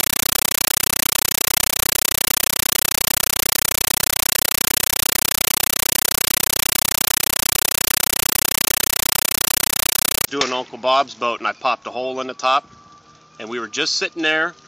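A Dolby Digital bitstream arriving over the S/PDIF or HDMI link was passed straight to the output as if it were ordinary PCM samples, so this is a compressed stream played as audio from 0.00 to 10.28 s. Each undecoded frame comes out as a 9.33 ms burst of noise followed by silent padding, repeating 31.25 times a second, which fits a 448 kbps AC-3 stream. The result is harsh, very loud chattering static in place of the intended sound.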